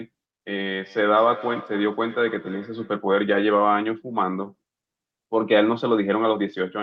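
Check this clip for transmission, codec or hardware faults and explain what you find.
One fault is present. Feedback echo between two devices, 0.82 to 3.06 s: a second device's loudspeaker feeds another's microphone, so the speech returns about every 300 ms, thin and ringing, about 16 dB below the speech.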